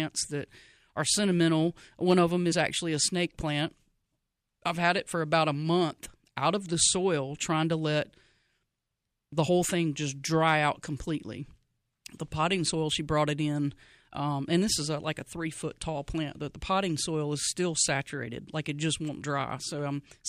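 At 2.51 s, between "of them" and "actually a snake plant", part of the compressed speech stream is damaged. The decoder cannot make sense of the frame data at that point, loses its place in the stream and has to hunt for the next valid frame header before it can resume normal decoding. The result is a very short chirp, squawk, click or short hole lasting under 20 ms in the middle of the speech.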